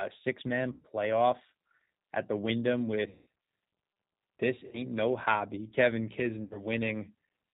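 G.729 codec, throughout: the whole recording carries the plainly audible roughness of a low-rate parametric speech codec, which fits G.729 at 8 kbit/s. Each short frame is rebuilt from a vocal tract model and a few sparse pulses, so the speech sounds band-limited below 4 kHz, slightly synthetic and grainy.

VoIP packet loss concealed by the speech codec, at 0.72 to 0.86 s, 3.09 to 3.26 s, 4.67 to 4.84 s and 6.43 to 6.64 s: speech is missing for about 120, 180, 60 and 80 ms respectively. The decoder fills each gap by repeating its last pitch and filter at falling gain, producing a fading smear that stays weak until it recovers.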